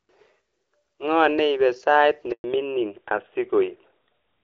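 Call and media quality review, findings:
Handover gap, 2.32 to 2.44 s, right after "neipe sait": voice dies away quickly, 120 ms of silence. No frames delivered while the call switched networks. Whatever fell in that window is gone.

Fallback to narrowband, 2.44 s to end: audio turns dull and rough, nothing above 4 kHz. After the handover the call left HD Voice, whose light, clear coding fits AMR-WB near 12.65 kbit/s, for an older narrowband codec, likely AMR-NB around 12.2 kbit/s.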